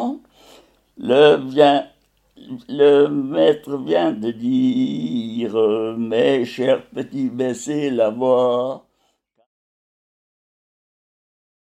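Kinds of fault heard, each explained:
No technical faults can be heard in this clip. Near the end the level eases down in a smooth fade-out, starting at around 8 s and finishing at 9.47 s with no click or hard edge.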